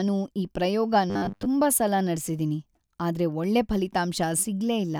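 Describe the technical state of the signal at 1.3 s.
At 1.3 s the speech sits inside a stretch of robotic sound from repeated short buffers, running from 1.10 to 1.46 s. The voice collapses into a stiff, metallic buzz fixed at 100 Hz that only loosely tracks the words. The likely cause is audio arriving too slowly, with the playback side looping a slice of about 10 ms to fill the gaps. For most of that span the sound is repeated material rather than new audio.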